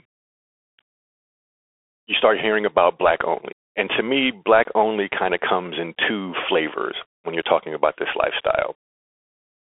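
Throughout, the speech shows Bluetooth CVSD headset codec damage: nothing above 3.7 kHz, with one-bit step coding that leaves scratchy sibilants and a granular hiss underneath.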